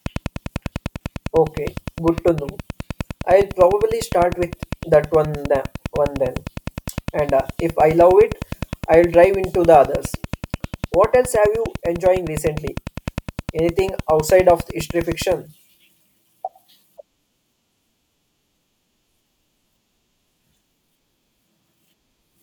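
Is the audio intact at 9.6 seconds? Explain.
No. A train of clicks runs from 0.06 to 15.33 s, regular ticks at 9.8 per second, around 5 dB above the speech and audible in pauses too, likely from interference or a faulty connection. The steady pace and uniform shape distinguish it from random crackle.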